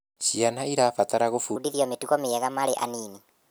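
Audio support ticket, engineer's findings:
Section at the wrong speed from 1.56 s to the end. Speech jumps faster and higher: 1.33x speed, pitch up about five semitones, both shifting together. Likely cause: player or edit stage clocking this segment at the wrong rate.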